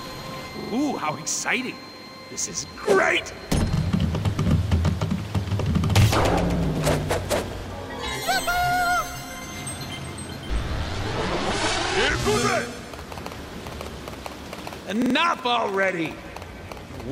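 Repeated buffer stutters at 0.60 to 0.73 s and 15.02 to 15.15 s (three extra plays each), and at 2.26, 3.76, 6.02 and 7.60 s (one each). Late-arriving audio made playback replay its last 43 ms block with hard joins, which fits a 2048-sample buffer.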